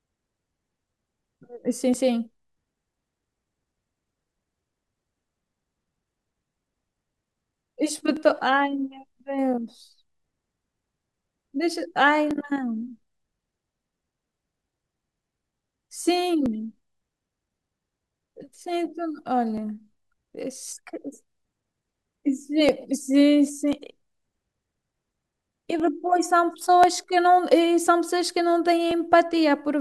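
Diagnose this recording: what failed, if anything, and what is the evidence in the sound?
A short click recurs through the speech at a steady interval of 1.04 s, from 0.9 s to about 28.9 s, some thirty events in all. The regularity points to the driver or buffer stage: clock drift buffer slips are the likely cause. Two devices run on independent clocks that disagree by roughly 0.1 percent. The buffer between them drifts until a small block, on the order of 50 samples, is dropped or repeated, and each slip produces a click.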